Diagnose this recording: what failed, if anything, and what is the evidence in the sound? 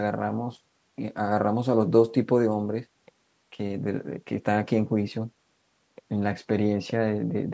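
Nothing failed; the speech passes through call processing intact.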